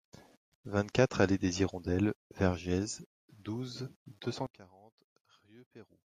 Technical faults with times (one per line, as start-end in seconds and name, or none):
4.47-6.08 one channel inverted